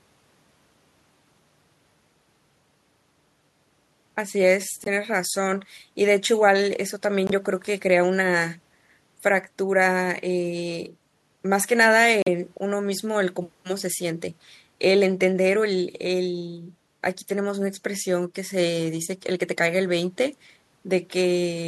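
Speech with short silent holes at 4.84–4.88, 7.27–7.31 and 12.22–12.28 s, showing as blank gaps in waveform and spectrogram, likely Bluetooth dropout from one or two lost packets.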